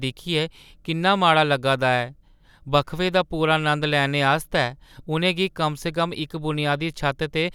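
Nothing sounds technically wrong in this speech recording, so there's no fault to point to at any moment.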